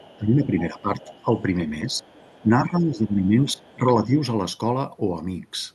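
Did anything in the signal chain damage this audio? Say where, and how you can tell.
Yes. Call processing let the other side's voice leak through at 0–0.17, 1.03–1.25, 1.9–2.45 and 3.54–3.77 s. It sits about 25 to 35 dB down. Echo cancellation likely missed loudspeaker pickup.

Speech is suppressed in double talk at 0.18–1.09, 1.83–2.04 and 2.42–4.16 s. The level dips by up to about 15 dB. The canceller likely ducked both talkers together.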